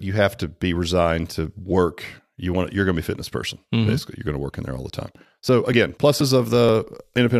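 From 5.01 s to 7.17 s, right after "in there all the", the speech is broken by periodic USB or driver dropouts. A blocking task stalls the audio path every 0.24 s. Each time, roughly 10 ms of signal is skipped outright rather than filled with silence. The gaps come about ten times in a steady rhythm. They sound like regular ticks or pops riding on the speech. The stall is likely a background process on the USB bus or driver.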